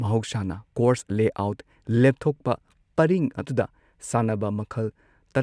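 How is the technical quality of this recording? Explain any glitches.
Nothing technical goes wrong anywhere in this short bit of speech, so there are no glitches to explain.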